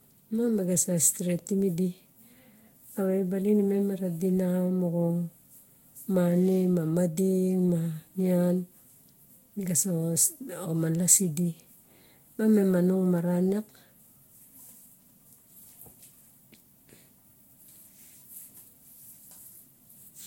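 A speech recording affected throughout by generation loss: the sound is swirly, smeared and hollow, with blurred attacks and nothing above 16.6 kHz. That is worse than a single encode near 64 kbit/s would give, so around five successive Vorbis-like re-encodes, each on a shifted frame grid, are the likely cause.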